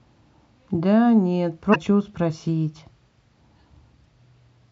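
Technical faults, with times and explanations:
1.71–1.76 s and 4.01–4.05 s, damaged data in a compressed stream: a short glitch of roughly 40 ms breaks into the speech twice. Corrupted bytes in the compressed stream made the decoder misread those frames and lose sync until it found a valid frame header.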